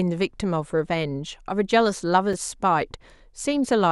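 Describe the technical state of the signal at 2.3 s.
At 2.33 s a block of digital silence about 5 ms long appears: the output buffer was most likely not filled in time, so zeros took the place of the speech. The abrupt cut to silence and back is heard as a tick or dip.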